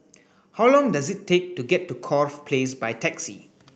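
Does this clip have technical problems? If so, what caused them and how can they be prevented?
No technical faults are audible.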